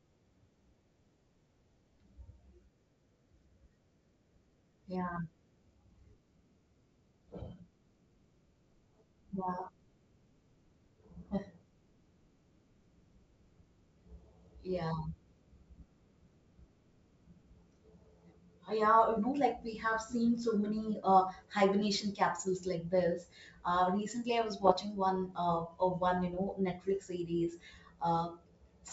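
Bits flipped on the ADPCM link, a G.722 path whose clean wideband sound points to the full 64 kbit/s mode, between 24.64 and 24.72 s, just after "uh recently i was". The error rate is low, roughly one or two bits in a thousand. Each corrupted bit throws the decoder's step size and prediction off track, so for about 80 ms the speech breaks into a rough, crackly burst with pops and a brief change in level.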